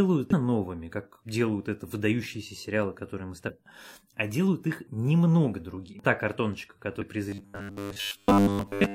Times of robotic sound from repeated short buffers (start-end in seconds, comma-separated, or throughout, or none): 7.29-8.94